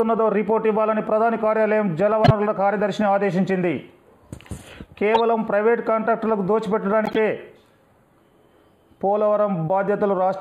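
Channel delay (comb filtering) runs through the whole audio: one channel lags the other by roughly a tenth of a millisecond before the mono sum, giving a hollow, phasey tone with fixed notches, the first around 5 kHz, visible on a spectrogram as evenly spaced dark horizontal bands. Corrupt frames were decoded at 2.24–2.31 s, 5.14–5.20 s and 7.05–7.18 s, the last spanning several frames, heard as a chirp, squeak, blip, noise burst or short hole, and seen as vertical smears of misplaced energy or gaps.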